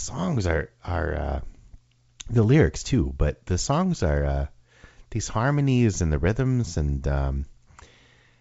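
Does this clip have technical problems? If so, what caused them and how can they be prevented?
No, there are no technical problems to report in this speech clip. It comes through G.722 wideband telephone coding at 64 kbit/s, which keeps the audio bandwidth up to about 7 kHz, and any coding trace is at most faint.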